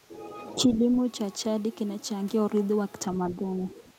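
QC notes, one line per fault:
0.06–0.88 s and 3.14–3.99 s, speech suppressed in double talk: the speech sags in patches across most of each span, by a few dB at first and by about 10 dB at the end, likely because an echo canceller mistook this talker for far-end echo and turned both down.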